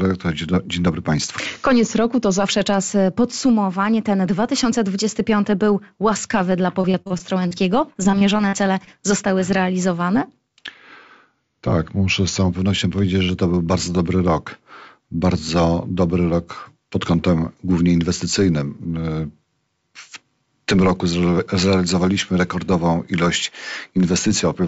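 A drift correction step at 1.45 to 2.43 s drops the audio about 5.9% in speed and about 104 cents in pitch, roughly a semitone flat. The same step returns at 10.69 to 12.50 s with identical values. The likely cause is clock-matching software slowing playback in a single jump to refill its buffer, so tempo and pitch sag together rather than being corrected gradually.

Repeated packet loss (robotic sound) runs from 6.82 to 7.53 s and again from 7.93 to 8.89 s. The first stretch holds six short holes and the second seven, none longer than about 40 ms. Each hole is patched by extending the preceding sound, which covers about 21% and then 17% of those spans. Because the patches come so close together, the audio turns choppy, with fragments missing. Throughout, the G.722 call path leaves nothing above 8 kHz.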